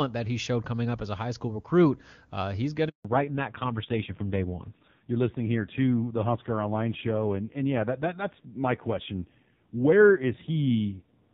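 At 2.89 s, just after "recruit uh he's going", a handover gap cuts the speech for 160 ms, until 3.05 s. While the call switches networks no frames arrive, so the sound fades within milliseconds and drops out. The waveform shows a flat-line stretch, and the spectrogram shows a blank vertical band.

From 3.05 s to the end, a fallback to narrowband follows. The clear wideband speech before the gap gives way to a duller, rougher low-rate narrowband codec. Nothing remains above 4 kHz, and the spectrogram shows a hard horizontal ceiling there.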